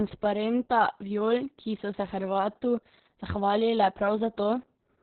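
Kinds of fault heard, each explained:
Opus voice compression: heavy narrowband coding cuts everything above about 4.4 kHz, leaving the speech muffled, hoarse and slightly robotic throughout, which fits roughly 6 kbps.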